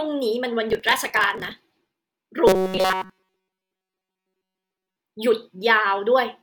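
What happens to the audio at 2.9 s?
At 2.9 s the speech has become a robotic sound from repeated short buffers, lasting from 2.47 to 4.96 s: a rigid, metallic buzz at 188 Hz that only loosely tracks the words. All of it is repeated material, likely loops of a roughly 5.3 ms buffer. Unlike a stutter, the loops are too short to hear as separate repeats and fuse into a steady pitch.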